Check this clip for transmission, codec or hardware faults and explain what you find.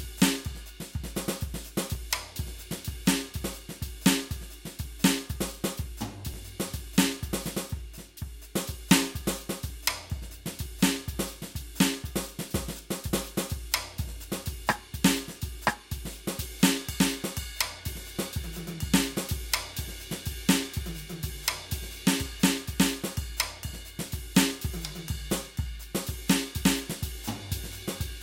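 Three small skips in this music, at 1.95 s, 6.34 s and 13.10 s. Each one sounds like the music lurching forward a touch, with no gap of silence. That's most likely a dropped buffer (overrun): the software didn't pick up its samples before the hardware wrote over them, so roughly 10 ms of audio vanished each time and the two sides got butted straight together.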